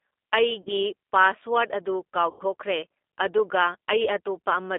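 All the way through, the speech has the plainly audible roughness of a G.729 codec at 8 kbit/s. The line is squeezed to roughly 250 Hz to 3.6 kHz, so there's no air up top and little weight underneath. Because the decoder rebuilds each 10 ms frame from a vocal tract filter, a pitch predictor and a handful of pulses, the voice comes out slightly buzzy and synthetic rather than natural.

At about 0.62 s there's a short stretch of VoIP packet loss concealed by the speech codec, lasting to about 0.70 s. About 40 ms of audio went missing, which fits two 20 ms packets. The decoder carries on from its last pitch and filter settings, so you hear a brief smeared hold instead of a gap, and the next syllable comes back a little weak.

The second concealment, from about 2.30 to 2.43 s, covers roughly 100 ms, which points to five lost packets. That's long enough for the extrapolated sound to turn into a fading buzz or coloured noise. 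Since each frame builds on the one before, the voice stays thin and distorted for a moment after real audio resumes.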